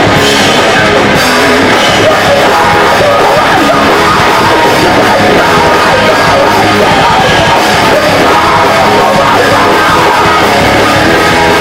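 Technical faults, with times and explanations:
Throughout, hard clipping: the signal was pushed about 12 dB past what one stage could pass, so its peaks were cut flat. Roughly a fifth of the audio lay over that limit. The flat tops add high harmonics, heard as fuzz on loud sounds.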